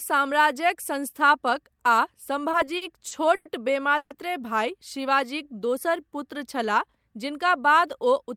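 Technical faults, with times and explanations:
2.51–3.47 s, repeated stalls (stutter): five gaps totalling 220 ms, longest 100 ms, bridged by continuing the last sound as late packets emptied the buffer, so the audio drags without losing anything.
3.97–4.12 s, call audio freeze: a 130 ms fill that fades to near silence, then the audio resumes where it stopped, shifted 130 ms later; likely held-up packets draining the jitter buffer.
4.97–6.56 s, jitter buffer slow-down: repeated pitch periods add 127 ms, so the audio runs at about 92% speed with unchanged pitch and stretched sounds while the buffer rebuilds its reserve.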